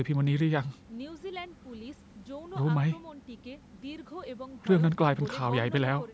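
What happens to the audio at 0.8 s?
At 0.8 s the speech is intact, passing cleanly through the call microphone processing with nothing dropped, distorted or interrupted.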